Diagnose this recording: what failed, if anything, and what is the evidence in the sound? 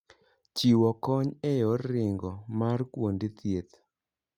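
Nothing here seems to have gone wrong at any stage; the speech comes across steady and intact, with no dropouts, glitches or other faults to point at.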